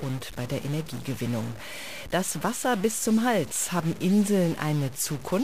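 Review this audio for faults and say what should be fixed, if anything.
Throughout, harsh buzz and hissing pauses point to a likely stuck bit. Samples jump by steps of about -35 dBFS, showing as broadband spectrogram haze and stepped waveform notches near zero. Check converter data lines and test with a low-level sine before recording.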